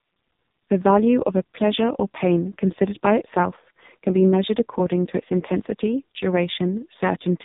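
AMR narrowband mobile codec damage runs throughout the speech, heavy, with nothing above 3.8 kHz. Each 20 ms frame rebuilds the voice from a vocal-tract model excited by sparse pulses, leaving it buzzy and synthetic, which fits the lowest 4.75 kbps mode.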